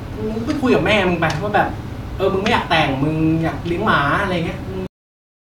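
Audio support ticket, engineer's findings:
Speech stops abruptly mid-sound at 4.87 s, then digital silence to end, no decay tail. Cut-off end: final buffers never written or played out, probable fault in capture/recording finalisation or playback flush, truncating the stream before the sound completed.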